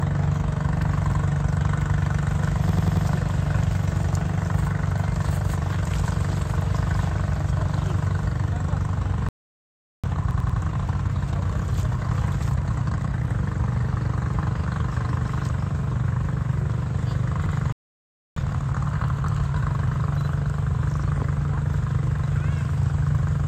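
At 1.12 s a repeated buffer appears. A block of about 93 ms plays twice, which fits a 4096-sample buffer that the device replayed when fresh audio arrived late. It sounds like a quick stutter with a hard seam at the join. At 2.69 s the same fault runs longer, to 3.07 s. The block sounds five times in a row, heard as a stutter. On a waveform these show as identical copied segments butted together. A spectrogram shows matching vertical slices with a sharp edge at each seam.

From 9.29 to 10.04 s a playback stall cuts the output for about 0.75 s, likely because the player ran dry or its thread was blocked. The sound stops mid-flow and then resumes. The waveform is flat and the spectrogram is blank for the gap.

From 10.04 to 13.3 s a time-compressed catch-up plays the backlog at 1.25 times speed. Small pieces are dropped and cross-faded, so the audio is hurried at normal pitch. A spectrogram keeps its harmonic spacing but packs events closer together. 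Within this stretch, from 10.31 to 10.59 s, a repeated buffer sounds the same 93 ms block four times.

A single repeat at 17.46 s leads into a second stall from 17.72 to 18.36 s, about 0.64 s of silence. A faster catch-up follows at 1.5 times speed until 19.62 s, rushed.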